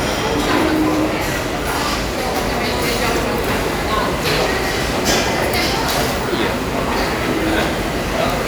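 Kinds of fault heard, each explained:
Clock drift buffer slips: A short click recurs about every 1.89 s, about four times between 0.99 s and 6.65 s. The likely cause is two devices running on separate clocks that differ by roughly 400 parts per million, so a buffer between them drifts until a block of a few dozen samples is dropped or repeated. On a waveform each slip is a small discontinuity, and on a spectrogram it is a thin, evenly spaced vertical broadband line.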